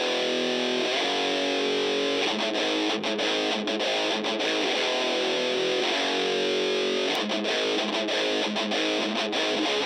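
At 5.79 s the sound briefly smears and lurches forward, a soft blurred blip rather than a sharp click, and a sliver of audio, roughly 50 ms, simply never arrives. This is compressed frames skipped: whole blocks of the coded stream were missing or rejected as damaged, so the decoder leapt ahead. The jump size fits about two frames of 26.1 ms each, and because adjacent frames overlap, their join blurs instead of cracking.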